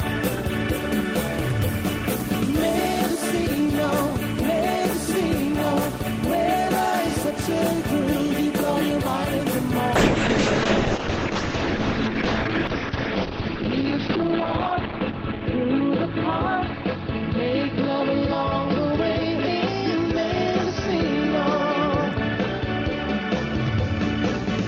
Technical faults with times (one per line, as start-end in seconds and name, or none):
9.96-24.68 call bitrate drop